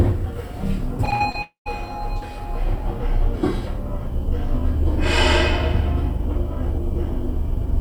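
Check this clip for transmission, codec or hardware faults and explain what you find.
There are two transmission faults, both from the network path.

Repeated packet loss (robotic sound) runs from 1.05 to 1.70 s. Packets went missing six times in that stretch, the longest hole about 64 ms, and the receiver patched each one by extending the preceding audio. About 120 ms was lost and 17 percent of the span is concealed, so the sound turns choppy, with small pieces cut away in quick succession.

Within that stretch, from 1.42 to 1.68 s, a long network dropout leaves roughly a quarter second missing, likely a brief break in delivery. The receiver first stretches the last audio into a fading buzz, then gives up, leaving about 130 ms of silence before sound resumes, with the lost portion simply skipped rather than recovered.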